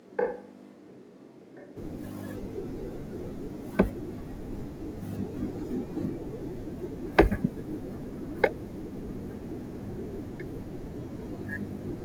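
From the very start until 1.75 s, the close microphone's feed was likely missing, forcing a switch to a distant microphone. The speech sounds roomy and hollow, thin in the bass and about 10 dB quieter, with faint room noise behind it, until the close sound cuts back in abruptly.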